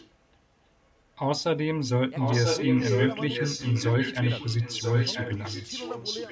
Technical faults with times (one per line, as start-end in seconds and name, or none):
0.00-0.10 echo leak
2.17-6.31 echo leak